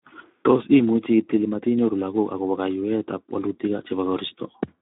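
Throughout the speech, Speex codec damage is plainly audible: a CELP coder, likely running near 11 kbps, starves the excitation, leaving a hoarse, noisy buzz. Unlike simple low-pass filtering, the texture itself degrades, while the band sits within about 200 Hz to 3.6 kHz, with nothing above 3.8 kHz.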